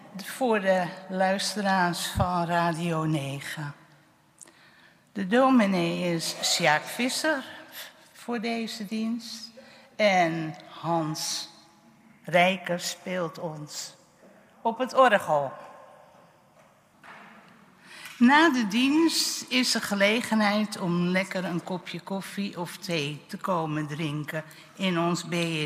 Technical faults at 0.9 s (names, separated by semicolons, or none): none